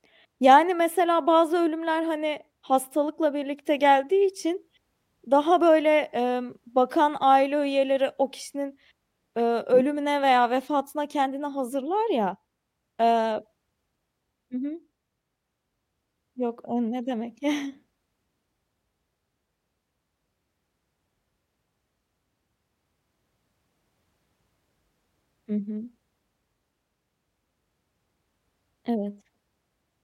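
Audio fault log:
No technical faults are present in the speech recording, and the signal holds steady for its whole duration.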